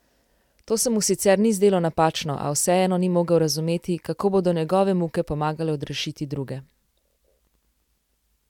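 No audible faults anywhere in the speech: no interruptions, level jumps or added noise at any point.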